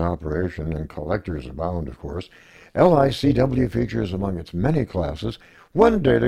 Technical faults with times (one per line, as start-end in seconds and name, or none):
0.00-6.27 overlap-add ripple